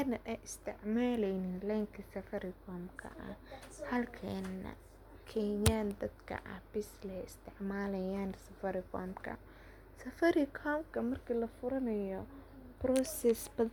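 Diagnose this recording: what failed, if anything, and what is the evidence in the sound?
Nothing failed here: I can't hear any fault in the recording at any stage, so there's no evidence to point to.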